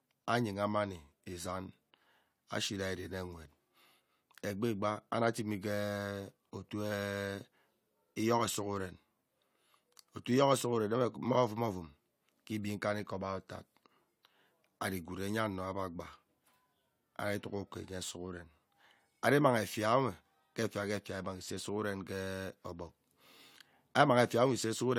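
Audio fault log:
Nothing to log here; this speech clip came through without a single fault worth noting.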